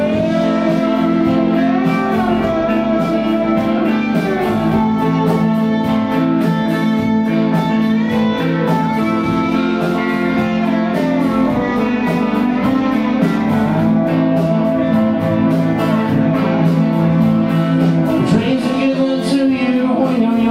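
No faults can be heard anywhere in the recording.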